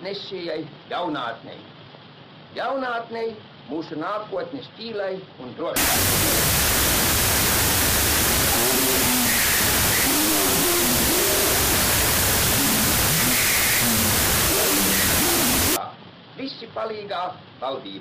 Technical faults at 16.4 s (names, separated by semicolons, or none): none